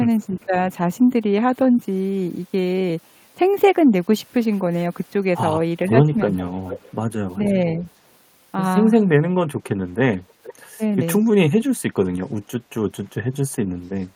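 At 0.41 to 0.47 s a faint echo leak appears: a delayed copy of the speech, about 35 dB below it, arriving 472 ms after the original. The far end is likely playing the call on a loudspeaker, and its echo canceller let some of that pickup return. Right after, from 0.48 to 0.53 s, the speech dips by roughly 5 dB. This is speech suppressed in double talk. With both sides active, the canceller likely could not separate its own talker from the echo and attenuated both. A deeper dip of around 10 dB follows at 6.43 to 6.5 s. The echo leak then returns far more clearly at 6.56 to 6.95 s, about 15 dB below the speech and again 472 ms late. It comes back once more at 10.15 to 10.54 s at about 20 dB down, with the same delay. The identical delay points to a single fixed echo path.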